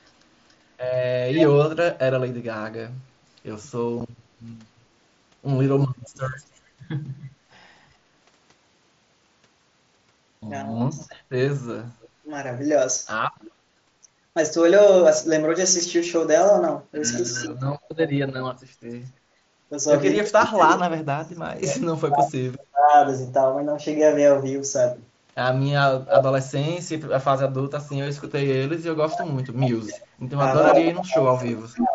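From 0.06 to 1.46 s a delayed copy of the speech trails it by about 0.29 s at roughly 5 dB below, likely echo leak from a loudspeaker-side echo canceller letting its microphone pickup through. At 4.00 s a single abrupt 7.5 ms hole appears, unconcealed Bluetooth headset packet loss, which fits one lost mSBC frame filled with silence rather than patched over. A faint echo returns at 6.38 to 6.44 s, about 35 dB down. From 7.17 to 7.38 s the speech dips by up to roughly 25 dB for about 150 ms, likely speech suppressed in double talk, with the canceller turning down the near talker while the far side speaks. The same dipping recurs from 10.93 to 12.28 s (up to about 20 dB, some 300 ms in all), from 17.32 to 22.93 s (up to about 40 dB, around 3 s in all) and from 29.01 s to the end (up to about 35 dB, around 2 s). Echo overlaps these at 12.02 to 13.51 s (about 25 dB down), 17.26 to 20.82 s (about 15 dB down) and 30.66 to 31.52 s (about 5 dB down), and returns on its own at 26.07 to 27.51 s (about 15 dB down). 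Its delay creeps from about 0.29 to 0.32 s across the clip.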